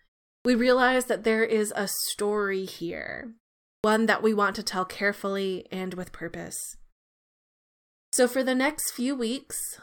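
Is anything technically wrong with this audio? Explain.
Yes. The clip has a clipped start after a pause at three points: 0.41–0.45 s, before "realize that there is"; 3.80–3.84 s, before "that we want to"; and 8.09–8.13 s. Each time the output device had gone idle during the preceding silence (0.41, 0.48 and 1.25 s long) and needed about 40 ms to wake and lock again. That opening slice of sound is lost, so speech jumps in abruptly without its first sounds.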